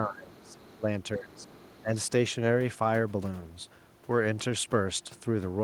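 Speech suppressed in double talk at 0.0–0.59 s, 0.77–0.87 s, 1.16–1.48 s and 1.82–1.92 s: the talker's voice sinks by up to about 20 dB in the opening stretch and by roughly 10 to 15 dB later. This likely comes from an echo canceller that could not separate talker from echo while both sides spoke, so it turned both down.

Other side's voice leaking through at 0.38–0.81 s and 1.32–1.82 s: a faint second voice, around 30 dB below the talker, sits beneath the speech. This is likely loudspeaker echo that the canceller failed to fully remove from the microphone signal.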